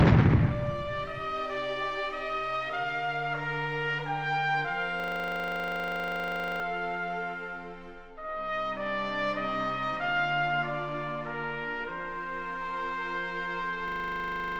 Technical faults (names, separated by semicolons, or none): system hang loop